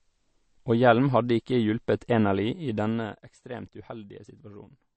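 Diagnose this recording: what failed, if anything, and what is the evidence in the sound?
MP3 compression throughout, a codec-stage fault: nothing above 8.3 kHz and plainly watery, swirling speech, likely an encode near 35 kbps dropping weak frequency lines.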